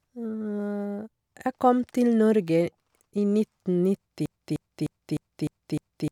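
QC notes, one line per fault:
4.26 to 6.12 s, broken-record loop: from 4.26 s right to the end, one 0.30 s fragment of the speech plays six times back to back, identical each pass, so it stutters mechanically and the speech that belonged there is lost. Likely a stalled player or stream resending its last chunk.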